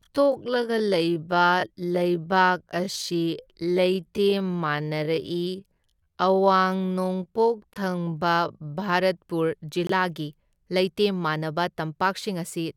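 From the start to 8.92 s, the speech runs at about 0.6 times its natural pace while its pitch stays put, a time-stretched section. The likely cause is software lengthening the passage to fit a slot, holding pitch by repeating short slices of the waveform. At 8.92 s the pace snaps back to normal.

Two abrupt dropouts occur, each the result of a corrupt frame being muted: 7.73 to 7.77 s, inside the stretched passage, and 9.87 to 9.91 s. Each silence lasts roughly 40 ms, which fits a single compressed frame that the decoder rejected because of flipped bits. The player filled the slot with silence, so the sound cuts out sharply and resumes on time, with no shift in the timing of what follows.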